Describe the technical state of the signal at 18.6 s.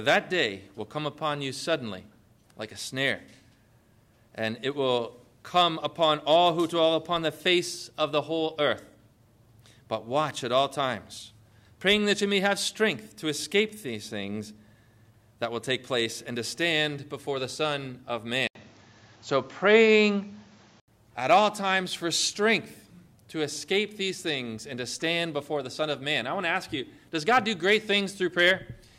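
At 18.6 s the sound turns duller from 18.47 to 20.88 s, likely an input switched to a poorer device. The spectrogram shows an 80 ms gap, then nothing above 7.6 kHz.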